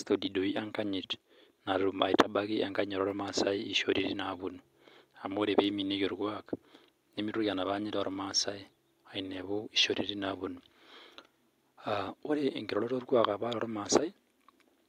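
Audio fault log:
2.19–2.21 s, microphone overload: a brief burst of harsh crackle lands on the loudest syllable of the speech here, lasting only about 20 ms. It's very likely the mic input was set too hot, so the peaks ran about 4 dB past what the converter could take and their tops got sliced flat. Roughly 7 percent of samples got squared off, which explains the short, gritty edge.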